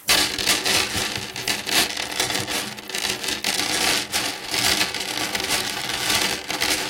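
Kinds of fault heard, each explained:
Crude rate conversion: gritty, inharmonic fizz from 5.33 s to the end, from samples dropped unfiltered, fitting a 48 kHz to 44.1 kHz change.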